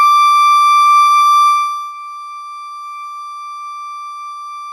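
The music carries no audible technical faults, with the signal staying intact for its whole duration.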